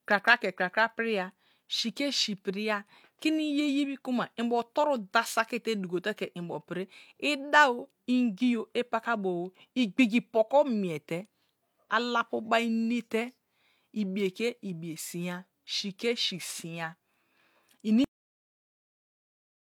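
At 18.04 s the final buffers were never written out, a cut-off end, so the speech stops abruptly in the middle of a sound. The signal drops straight to digital silence with no natural decay, and that silence fills the remaining 1.6 s.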